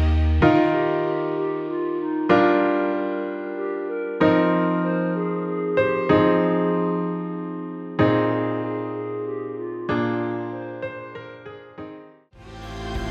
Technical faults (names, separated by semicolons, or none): none